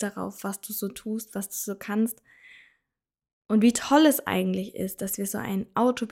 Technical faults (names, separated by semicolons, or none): none